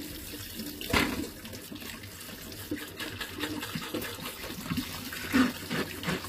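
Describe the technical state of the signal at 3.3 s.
At 3.3 s the audio carries HE-AAC compression damage, present from start to end rather than at that moment alone. The treble sounds synthetic. It is gritty and metallic, with harmonics that fail to line up above the crossover. Nothing is heard above 15.4 kHz. The likely cause is spectral band replication. Only the lower band is truly coded, and higher content is copied up and roughly shaped. The plainly audible damage fits a low bitrate near 24 kbps.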